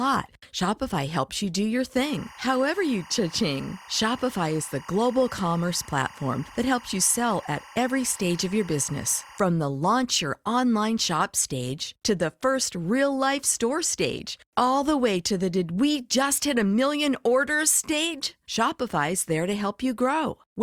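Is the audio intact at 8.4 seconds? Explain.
No. At 8.4 s the speech carries timecode bleed, running from 2.02 to 9.39 s, after "helps you do your" and ending before "the launch your online". Leaked 24 fps linear timecode flips between tones near 1 and 2 kHz, giving a chirping warble around 20 dB below the speech. That two-pitch, frame-rate flutter sets it apart from a steady single-tone whine or hum.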